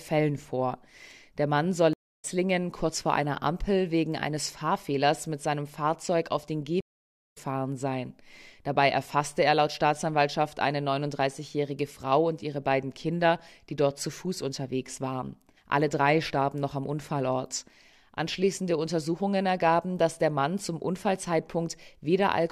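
At 1.93 s and again at 6.81 s there's a stream reconnect: the connection drops and the audio goes silent, for 288 ms and then 519 ms, while the player reconnects and starts a fresh decoder. Each time the sound picks up roughly a third of a second further on, so a bit of material just goes missing.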